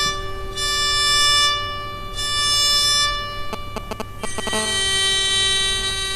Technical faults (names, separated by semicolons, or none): GSM signalling bursts; GSM phone buzz